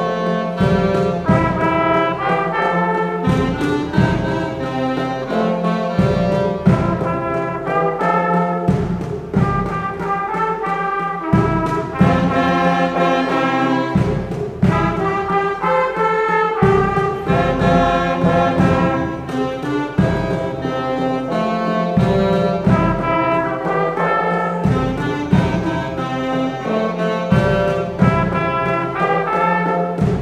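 Nothing stood out as a technical fault on listening to this recording.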